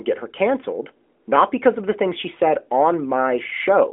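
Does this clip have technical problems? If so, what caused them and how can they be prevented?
No technical faults here.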